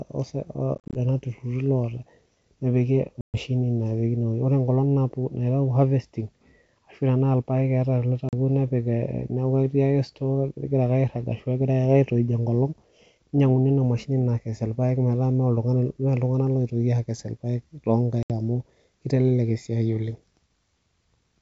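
Packet loss on an ADPCM call hits the speech at 0.75, 3.21, 8.29 and 18.23 s. Silent holes open, then the decoder's predictor, out of step with the sender's, leaves the speech slightly distorted until it settles.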